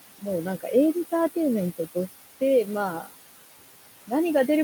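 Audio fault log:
Throughout: noise suppressor artifacts. The room noise sits about 13 dB below the speech. The suppressor pulls it down by about 17 dB in the gaps between phrases. It does this band by band, frame by frame. So the background dips in the pauses and swells back under the speech.
3.01 to 3.14 s: speech cut by the noise suppressor. For about a tenth of a second, the suppressor treats part of the speech as noise. It turns that stretch down along with the background, by up to about 15 dB. The affected sound comes across as swallowed and faint.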